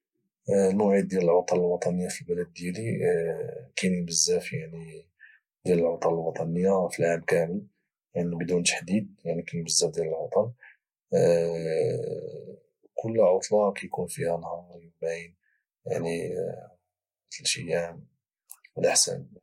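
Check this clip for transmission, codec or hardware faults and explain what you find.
Nothing in this speech recording points to a fault anywhere along the chain that carried it. There is nothing to flag at any point in the clip.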